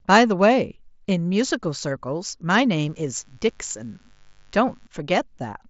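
Speech over what sounds like a Bluetooth mSBC headset link, with nothing above roughly 7.7 kHz, carries a raspy 50 Hz mains buzz from 2.81 to 4.87 s, spiky harmonics from unshielded or switched power, sitting far below the speech.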